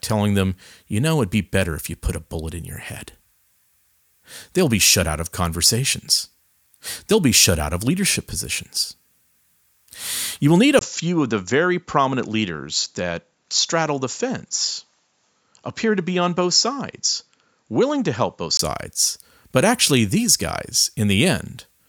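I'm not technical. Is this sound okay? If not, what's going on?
No. From 10.79 s to 18.59 s the speech turns duller and slightly quieter, with a faint new background noise, and a very brief gap of about 20 ms where it changes over. That pattern is the mark of an input switched to a poorer device, most likely a different microphone or a headset taking over. During that stretch nothing above about 7.6 kHz comes through, which takes the crispness off the speech.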